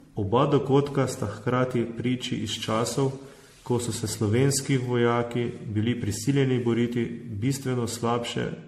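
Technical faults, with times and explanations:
Throughout, generation loss: speech sounds swirly, smeared and hollow, attacks blurred, nothing above 16.1 kHz. Likely about ten MP3 re-encodes compounding errors.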